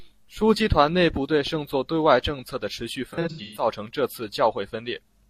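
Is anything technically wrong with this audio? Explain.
Yes. Between 3.10 and 3.66 s, after "策的持续" and before "成这次", there is AAC frame loss with concealment. About 300 ms of frames went missing, scattered across roughly 430 ms with runs of up to around 150 ms. The decoder rebuilt each gap from the last good spectrum, so the speech there turns smeared, noisy or phasey.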